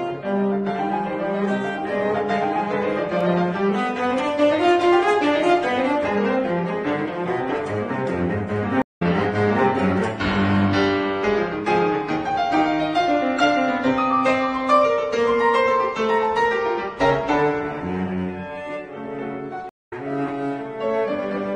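Twice the audio drops out and comes back slightly further along, the signature of a stream reconnect. At 8.82 s there is a gap of 138 ms, and when the sound returns at 9.02 s it has skipped ahead by roughly 100 ms. At 19.69 s a 170 ms gap follows, and at 19.93 s the audio picks up around 150 ms later than where it stopped. Each time, the connection broke, the player fell silent, then reconnected and started a fresh decoder partway into a live stream, losing the stretch that passed in the meantime.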